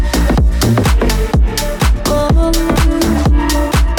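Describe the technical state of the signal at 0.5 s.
At 0.5 s the signal is intact, with no dropout, distortion, glitch or other fault audible at that point.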